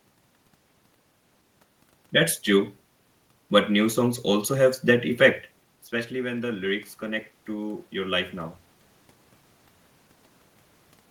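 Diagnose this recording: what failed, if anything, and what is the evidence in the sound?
The call-processing stage's automatic gain control misbehaved: from 6.09 to 8.64 s the level climbs by about 4 dB after the voice drops about 12 dB when the talker moves back around 5.5 s. Room noise swells along with the voice, which marks automatic gain rising rather than the talker approaching again.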